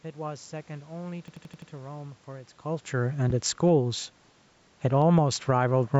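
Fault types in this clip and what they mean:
System hang loop: at 1.28–1.71 s, a frozen driver let the hardware replay one 85 ms chunk five times, an 11.7 Hz machine-gun stutter fitting a 4096-sample buffer.
Loud pop: at 3.30 s, a single sharp pop about 5 dB above the speech, likely a voltage pulse from a switch, static or driver glitch.
Automatic gain falling: from 4.81 to 5.20 s, the gain control judged the input too loud and eased it down about 5 dB, speech and background sinking together.
Automatic gain rising: from 5.10 to 5.94 s, the gain control judged the input too quiet and raised it about 4 dB, speech and background swelling together.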